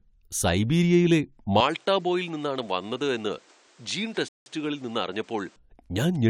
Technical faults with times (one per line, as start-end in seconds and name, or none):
1.60-5.56 input switched to a poorer device
4.28-4.46 rebuffering stall